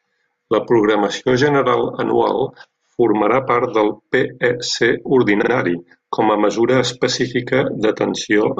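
At 5.41 s the speech stutters briefly as a repeated-frames fault. A 48 ms stretch of compressed audio, consistent with a pair of codec frames, is played two extra times before the sound moves on, so the same sliver is heard three times in a row until 5.51 s. This lengthens the clip by 96 ms. On a spectrogram the 48 ms block appears as identical side-by-side slices. The waveform shows the same short shape copied three times.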